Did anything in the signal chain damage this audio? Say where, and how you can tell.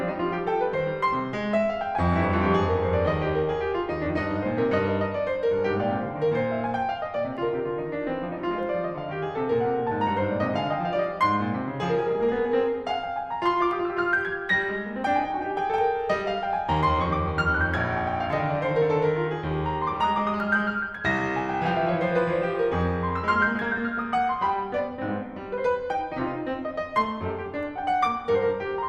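Yes. The music carries four isolated sharp clicks, at 7.37, 13.71, 15.78 and 18.33 s, each a single tick with a thin vertical line running through the whole spectrum. Nothing audible goes missing around them. These are likely dropped samples at the driver or buffer stage. A tiny fraction of a millisecond of the stream vanishes, so the waveform steps abruptly from one value to a later one, and that discontinuity is heard as the click.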